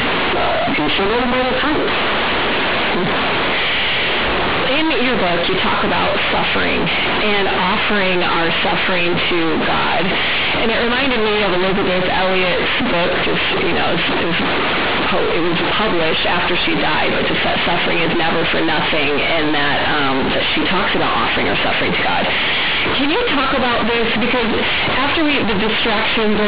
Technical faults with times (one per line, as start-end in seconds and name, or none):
0.00-26.47 companded audio read as linear